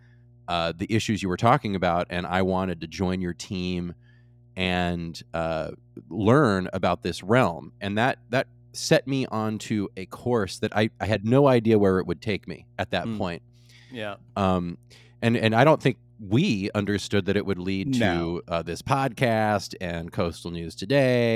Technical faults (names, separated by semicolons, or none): mains hum